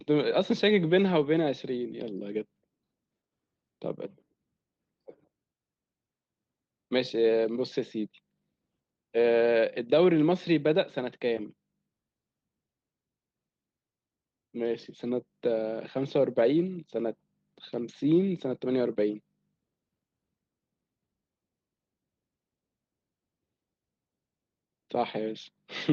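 The speech carries no technical fault, with the Opus voice coding working as intended in its hybrid mode and keeping the full band, which fits a rate of around 24 kbps.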